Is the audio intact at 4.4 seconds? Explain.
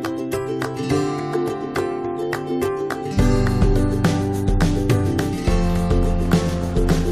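Yes, the audio is intact at 4.4 seconds, with no fault audible at that moment.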